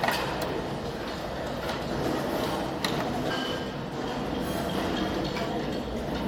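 A brief chirp, squawk, click or short hole cuts in at 3.30 to 3.32 s and again at 5.48 s: damaged data in a compressed stream, where corrupted bytes made the decoder misread frames and lose sync.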